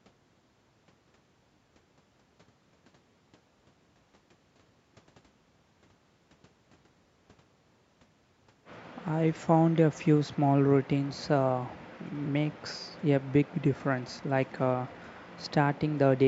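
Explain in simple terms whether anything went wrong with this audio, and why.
Nothing went wrong with this speech recording. It has gone through the normal microphone processing of a call, which trims the very deepest bass and leaves nothing above 8 kHz, and that is expected rather than a fault.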